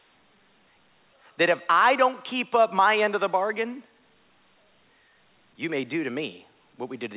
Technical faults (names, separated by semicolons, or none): none